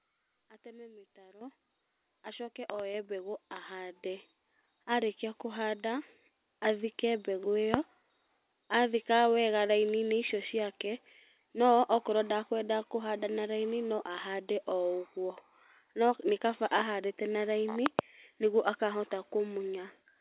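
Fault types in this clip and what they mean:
Microphone volume stepped up: The call software judged the microphone too quiet and raised its input gain in single jumps, so speech and background noise get louder together, by about 10 dB at 1.41 s, about 4 dB at 2.94 s and about 5 dB at 3.96 s.
Loud pop: Sharp clicks sit on top of the continuing speech, far louder than it, around 25 dB above. There are two in quick succession at 2.70–2.82 s, one at 7.74–7.76 s and two at 17.86–18.01 s, likely from voltage spikes from a switch, plug, static or driver glitch.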